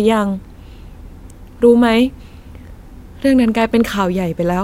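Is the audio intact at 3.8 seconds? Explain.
Yes, the speech at 3.8 s is intact, with no fault at that moment.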